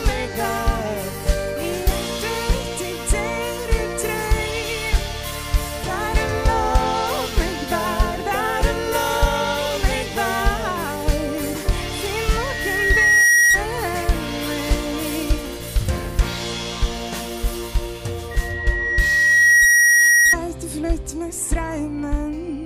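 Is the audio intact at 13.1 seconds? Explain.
No. A loudspeaker feedback squeal runs from 12.31 to 13.62 s. The microphone is picking up its own loudspeaker, and the loop gain exceeds one at 1.9 kHz. That tone swells over about a second into a squeal about 10 dB above the sound.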